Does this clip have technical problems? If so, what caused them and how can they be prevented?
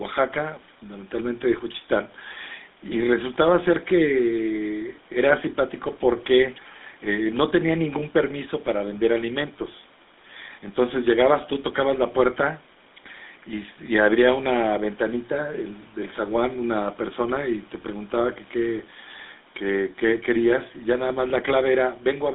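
Yes. Throughout, GSM full-rate codec damage is plainly audible: the vocal tract is modelled from a sparse, regularly pulsed excitation, giving buzzy, gravelly speech, which fits 13 kbps coding. A spectrogram shows energy only between 200 Hz and 3.7 kHz. Prevent it by recording locally or using a wideband codec.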